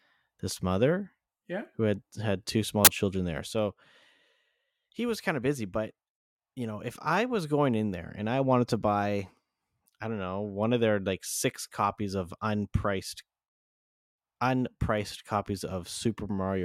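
At 2.85 to 2.87 s, between "had had two small" and "children there so", file tags played as audio: an embedded cover picture's compressed bytes are read as samples, giving a hard-edged burst of very loud white noise, unlike a single click or a silent dropout.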